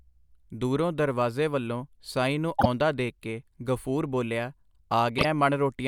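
Frames out of order, at 2.59 to 2.66 s and again at 5.18 to 5.25 s: two neighbouring single frames, each fitting a 24 ms block, were decoded in swapped order. Each short stretch plays with its halves exchanged, giving a brief garbled flutter, and no time is lost.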